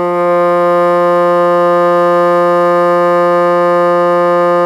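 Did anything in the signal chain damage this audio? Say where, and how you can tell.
No, nothing in this music stood out on listening as damage from any stage of the signal chain.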